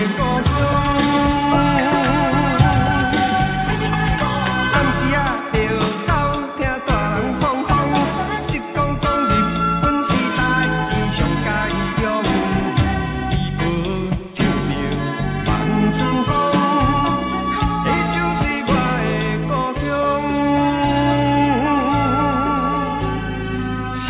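The clip is a piece of audio with no technical fault to report. Nothing in it points to a problem in how it was recorded, processed or delivered.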